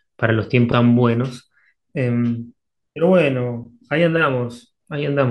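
A short speech recording with a single CD skip at 0.72 s. The player mutes very briefly, for only a couple of milliseconds, which comes across as a small tick. Playback then resumes from a different point on the disc. A shock or a surface flaw knocked the laser onto another turn of the spiral. The speech jumps forward or back by a whole number of revolutions, each a tenth to three tenths of a second.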